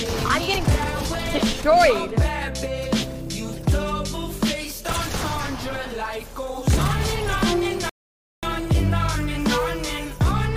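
A rebuffering stall at 7.89 to 8.43 s: playback drained its downloaded audio, fell silent for about 0.53 s, then resumed exactly where it stopped, losing nothing.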